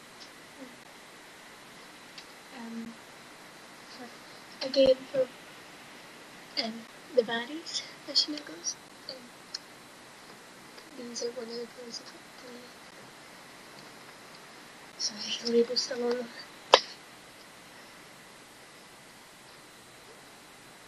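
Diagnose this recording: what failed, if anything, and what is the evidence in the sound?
A gap at a join of encoded pieces recurs every 2.0 s, at 0.84, 2.85, 4.86, 6.87, 8.88, 10.90, 12.91 and 14.92 s. These are brief silences of 14.4 ms first, then 11.4 ms, with smeared edges. This is a codec-stage fault: separately encoded segments were concatenated untrimmed, so encoder delay and final-frame padding remain.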